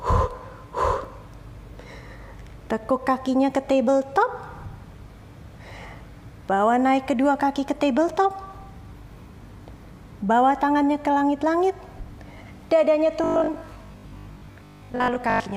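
From 13.24 s right through to 15.56 s the sound goes robotic, turning into a stiff, metallic buzz pitched at 50 Hz that only loosely tracks what came before. The likely cause is robotic sound from repeated short buffers: fresh audio wasn't arriving often enough, so the same 20 ms chunk kept getting replayed in its place. That repetition stamps the fixed 50 Hz drone on top, and roughly half the material there is repeats rather than new audio.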